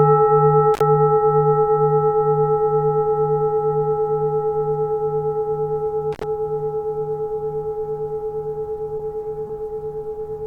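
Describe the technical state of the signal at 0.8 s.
At 0.8 s the signal is inside an intermittent contact fault running from about 0.74 to 0.81 s. A loose plug or cable connection briefly loses continuity, so the line goes open for roughly 54 ms and the programme audio drops out. The break and remake of the contact produce crackle at both edges of the gap, and during the open interval faint hiss remains where the sound should be.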